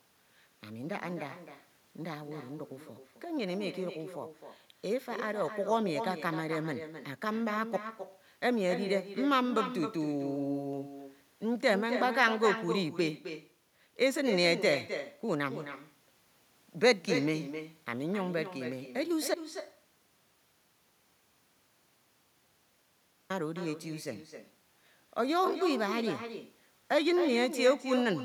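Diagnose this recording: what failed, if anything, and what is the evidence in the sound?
Throughout the speech, every phrase is trailed by a fainter, thinner copy arriving around 300 ms later and sitting about 9 dB below the direct voice. This is echo with no canceller, a call-processing failure. The far end is playing the call over a loudspeaker, its microphone picks that playback up, and no echo canceller strips it out, so the talker's own voice returns after the network round trip.

From 19.34 s to 23.30 s the speech stops abruptly and the gap is silent, with no room tone or noise floor. About 3.96 s of audio is simply gone before sound resumes mid-flow. This is an audio dropout to silence at the input or driver stage. The likely cause is that the capture source was lost, through a disconnect, a link failure or a momentary mute, while the recorder kept writing silence.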